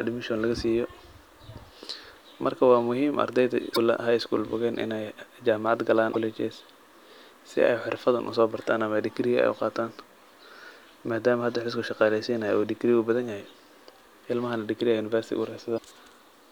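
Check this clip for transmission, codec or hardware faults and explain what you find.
There's one problem here, and it shows up three times: damaged data in the compressed stream, at 3.72 to 3.78 s, 6.10 to 6.16 s, and 15.74 to 15.80 s. Each time, a stretch of bad bytes makes the decoder misread frames and lose sync until it finds the next header, so you get a brief glitch of about 56 ms.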